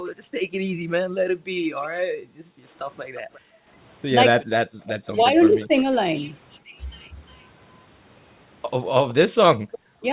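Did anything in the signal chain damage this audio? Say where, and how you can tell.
Yes. The call processing stage did the damage, specifically the echo canceller. The band stopping at 4 kHz fits the G.711 A-law call path at 64 kbps.

Background gated by the echo canceller: the room sound drops by up to about 40 dB across 0.0 to 4.83 s, about three seconds affected in total. It dips again by about 15 dB at 6.61 to 6.76 s and by about 40 dB at 9.29 to 9.7 s. Only the ambience collapses and then recovers, which separates this from double-talk suppression.

Echo leak: a faint delayed copy trails the main sound by 354 ms, from 1.82 to 6.58 s at about 25 dB down and from 9.09 to 9.78 s at about 20 dB down. The likely cause is a loudspeaker-side canceller letting residual pickup through. The fixed delay distinguishes it from room reverberation.

Speech suppressed in double talk: the talker briefly sags by roughly 10 dB within 5.13 to 5.87 s and cuts out by roughly 35 dB at 9.98 to 10.05 s. 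The likely cause is the canceller ducking both sides during overlapping speech. The drops hit the talker, not just the background.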